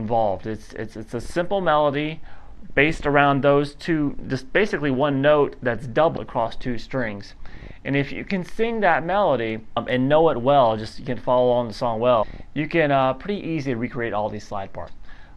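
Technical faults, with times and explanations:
6.16 s, 9.75 s, 12.22 s and 14.86 s: damaged data in a compressed stream. At each of these four points a short stretch of the encoded data arrived corrupted, so the decoder could not read the affected frame correctly. It either misdecoded the bad bytes or discarded them, then lost sync and had to hunt for the next valid frame header. Each event lasts under 20 ms, a brief disruption in the audio before normal decoding resumes.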